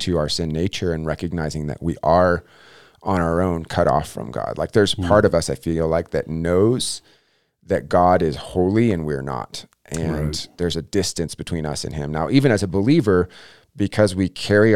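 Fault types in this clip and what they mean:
crude rate conversion: From 11.09 s to the end, the speech gains a faint, gritty, inharmonic fizz. Samples were linearly interpolated without a filter, which fits a 48 kHz to 44.1 kHz change. The error sits about 40 dB down and follows louder, brighter sounds.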